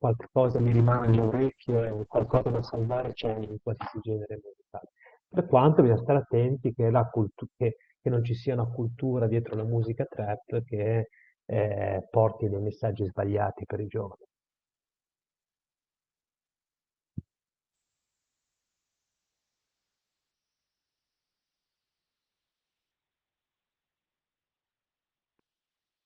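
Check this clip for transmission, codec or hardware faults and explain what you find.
Two call bitrate drops affect this speech, which passes through an Opus call path. From 0.48 to 7.85 s, the audio band narrows from 12 kHz to 8 kHz, and it stays at its worst for about 3.1 s. From 17.75 s to the end, it narrows from 12 kHz to 4 kHz and stays there for about 5.9 s. The sound points to the bandwidth estimate collapsing and the encoder falling from around 32 kbps to about 7 and 6 kbps. Coarser coding makes the speech rough and watery, and the lost top end muffles it, most heavily in the second drop.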